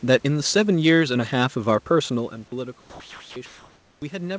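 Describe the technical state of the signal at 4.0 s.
At 4.0 s three things overlap. Comfort noise has replaced the real background from 3.46 to 4.02 s: a steady, featureless hiss about 1 dB quieter, likely because the sender's discontinuous transmission stopped sending during the pause. Right at 4.00 s the returning speech has its onset clipped by the voice detector. About 20 ms of its soft start is missing, so it begins abruptly, likely because the detector was slow to reopen. Automatic gain has also been rising since 2.13 s after the input fell about 18 dB, so voice and background swell together to the end, alongside the talker shifting position around here.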